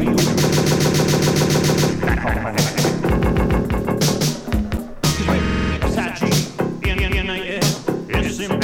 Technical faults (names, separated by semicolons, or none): doubled audio track; repeated frames